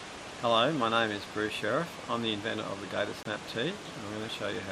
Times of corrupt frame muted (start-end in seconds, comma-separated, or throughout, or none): 3.23-3.27